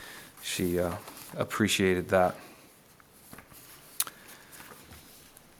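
No faults can be heard anywhere in the clip.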